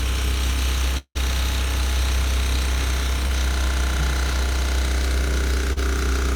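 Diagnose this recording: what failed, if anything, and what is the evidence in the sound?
Long network dropout, 0.97 to 1.17 s: the sound continues as a fading fill, then about 60 ms of silence. Likely a network stall lost 160 ms.

Short concealed packet loss at 3.27 s and 5.73 s: brief smears where the decoder bridged 20 ms and 40 ms of missing network audio with extrapolated sound.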